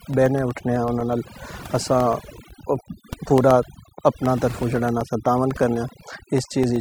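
Speech with overdone noise removal throughout: a noise reducer set too hard has pushed frequency bands near its noise estimate down to nothing, taking quiet parts of the voice with them. The background drops and breaks up into twinkling specks, unlike a low-bitrate codec, which smears detail rather than gating bands on and off. Periodic USB or driver dropouts also run from 0.14 s to 6.76 s, repeating every 0.125 s, about eight times a second and around fifty in all. Each blanks roughly a millisecond of audio to silence, which points to a background task stalling the bus or driver. They differ from random clicks or clipping crackle because they are rigidly evenly spaced and tick only where there is signal.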